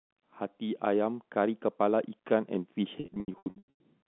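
At 3.0 to 3.79 s, packet loss with pitch repetition patches gaps of up to 100 ms with the repeated pitch period. It sounds buzzy and held.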